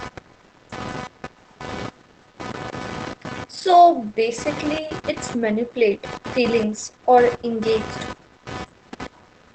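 Computer activity noise runs through the whole recording: a buzzing, chirping pulse train at roughly 300 Hz, sitting about 15 dB below the speech. It tracks load changes in the computer feeding into the audio circuit's shared ground, rather than anything in the speech itself.

Opus voice compression also affects the entire clip. The speech is muffled, hoarse and somewhat robotic, with nothing above 8.6 kHz. The heavy, coarse coding of the SILK voice coder in wideband mode points to a bitrate near 10 kbps with 20 ms frames.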